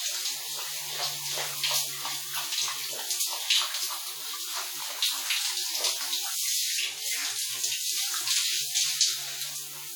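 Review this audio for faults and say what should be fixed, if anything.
Throughout the clip there's transcoding between lossy codecs: two sets of coding artefacts are layered together, which points to an HE-AAC pass at around 48 kbit/s and likely a second WMA encode at a similar rate. The second encoder spends its bits re-coding the first one's artefacts while adding its own, and nothing survives above about 20.1 kHz. To prevent it, go back to an uncompressed or lossless source and encode only once, straight to the delivery format.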